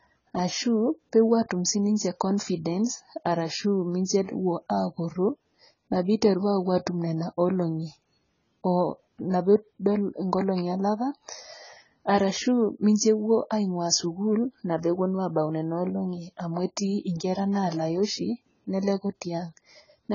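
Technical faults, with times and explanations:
Throughout, AAC compression: the speech was likely squeezed through a heavily starved AAC-LC encoder, consistent with roughly 16 kbps, which discards everything above 7.1 kHz and coarsely quantises what remains, so the sound is dull and smeared, with warbling, fizzy sibilants.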